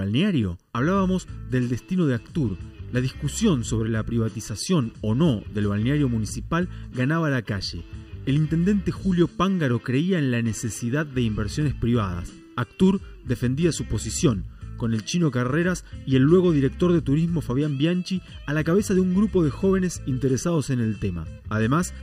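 Throughout the clip, channel delay (comb filtering) leaves one channel a fraction of a millisecond late, roughly 0.7 ms, before mono summing. Cancellation carves evenly spaced notches from around 700 Hz upward, so the sound is hollow and phasey rather than simply muffled like a low-pass.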